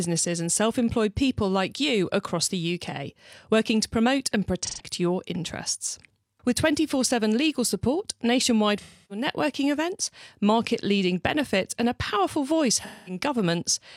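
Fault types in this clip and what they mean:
AAC frame loss with concealment: missing AAC frames were patched from the last good spectrum, leaving three smeared, noisy gaps of roughly 0.13 to 0.3 seconds in the speech.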